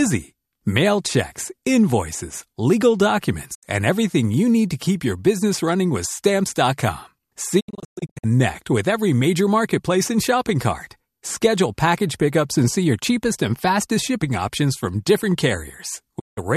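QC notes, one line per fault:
3.53 to 3.65 s, digital broadcast dropout: right after "checks invoices legal" the speech dips out for about 72 ms, with a quick 20 ms fade, then comes back at "and everything you need". The receiver muted over what sounds like three bad frames.
7.59 to 8.25 s, digital broadcast dropout: a stuttery patch of several short holes totalling about 408 ms spread over 624 ms, the longest run around 120 ms, before "with every major marketplace". Lots of failed frames, so the receiver keeps muting and recovering.
16.18 to 16.39 s, digital broadcast dropout: one more 168 ms mute with a 20 ms fade right near the end. The signal dropped briefly, and whatever was sent during that gap is simply gone.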